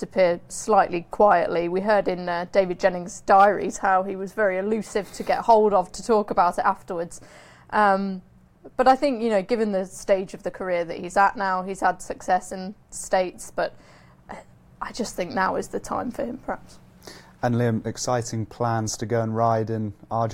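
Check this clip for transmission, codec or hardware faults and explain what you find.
Nothing wrong can be heard anywhere in this clip.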